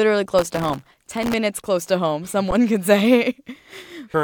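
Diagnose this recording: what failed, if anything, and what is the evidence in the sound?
Processor overload crackle at the driver and buffer stage: the CPU repeatedly missed deadlines for sub-millisecond buffers, patching gaps with stale audio. The result is gritty crackle from 0.39 to 1.34 s, just before "close to home".

Underrun with held sample in the output buffer: at 2.51 s, after "close to home", the converter holds one level for 11.61 ms, which fits a 512-sample buffer. The sound goes flat and resumes with only a soft click.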